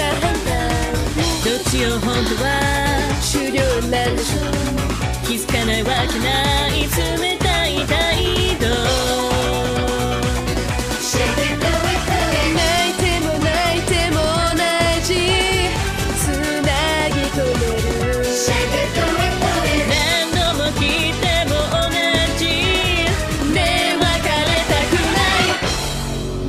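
Clock drift between sender and receiver runs through the whole audio: the sending side's clock is around 4 percent fast, so the receiver's buffer keeps overfilling. From 8.98 s to the end, there are repeated timing corrections as the receiver trims short bits to catch up. The playback speed works out to 104 percent, with small, unevenly spaced hiccups.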